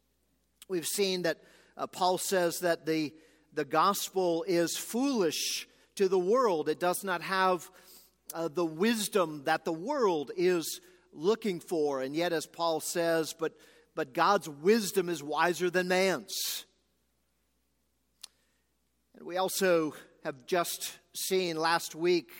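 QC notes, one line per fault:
No faults detected.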